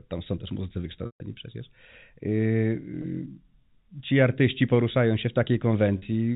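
Packet loss with pitch repetition: audio packets were dropped, and the receiver bridged each gap by repeating the last pitch period. Just after "tam są też muzycy", 140 ms is lost at 1.06–1.20 s, which fits seven 20 ms packets. The repeated period holds as a buzzy tone, fades toward silence, and then the speech cross-fades back in. Shorter gaps of 20 ms at 3.02–3.04 s and 40 ms at 5.98–6.02 s come across as a brief, slightly held buzz, heard within the 4 kHz band of the G.711 telephone coding.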